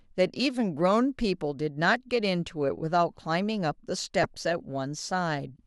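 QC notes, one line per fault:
4.23–4.39 s, DAB burbling: about 0.16 s of burbling over the speech. Bit errors, around two per thousand, get past error correction into the MP2 data and corrupt scale factors and samples, so single sub-bands jump in level. This fits roughly ten damaged frames.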